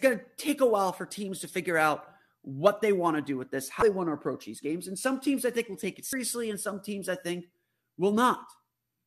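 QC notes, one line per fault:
3.79–3.82 s and 6.10–6.13 s, damaged data in a compressed stream: two 30 ms glitches break into the speech, first between "to do with this" and "want to approach these", then between "think will take it" and "and some teams I". Corrupted bytes make the decoder misread those frames and lose sync until it finds the next valid header. A spectrogram shows each one as a short, abrupt break in the speech pattern, and the waveform shows an abrupt discontinuity.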